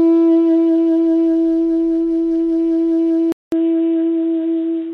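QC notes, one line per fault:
3.32–4.93 s, input switched to a poorer device: the recording likely jumped to a narrower-band input, so after a 200 ms gap the music loses everything above 3.8 kHz and turns dull and boxy, at about the same level, with faint new background noise about 40 dB down.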